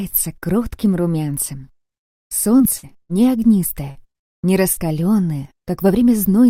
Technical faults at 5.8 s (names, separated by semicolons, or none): none